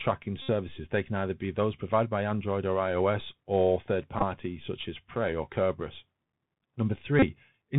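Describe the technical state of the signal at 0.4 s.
Just after 0.4 s, from 0.42 to 0.50 s, a Bluetooth headset packet repeat replaces about 68 ms with a steady buzz near 267 Hz, which fits lost packets being refilled every 3.75 ms. Unlike a plain dropout, it buzzes instead of falling silent. Underneath, the Bluetooth CVSD headset codec runs throughout: the one-bit delta coding, which points to a 64 kbps stream, cuts everything above 4 kHz and leaves a granular hiss and scratchy s sounds, unlike a clean low-pass filter.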